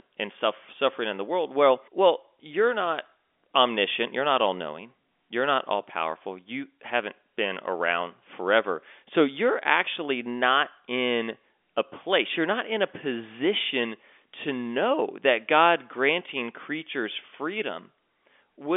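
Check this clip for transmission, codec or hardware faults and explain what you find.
No transmission, codec or hardware fault turns up anywhere in this speech recording. It comes through a G.711 telephone path, A-law at 64 kbps, so the speech sits in a narrow telephone band of roughly 300 Hz to 3.5 kHz with nothing above about 3.7 kHz.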